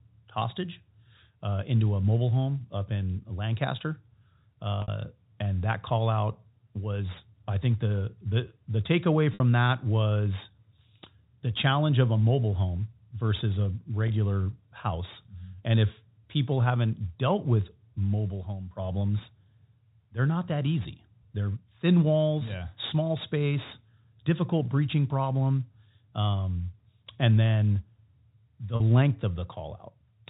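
Packet loss with pitch repetition interrupts the audio four times. The receiver covered each gap by looping the last pitch period. At 4.82 s, just before "and that call out", a 60 ms hole becomes a brief buzzy hold, as does another after "the the the takeaway" at 9.34 s. A 20 ms gap after "mobile home versus a" at 14.08 s is the shortest, and a 40 ms one at 28.76 s falls between. Each gap fits whole 20 ms packets, heard within the 4 kHz telephone band.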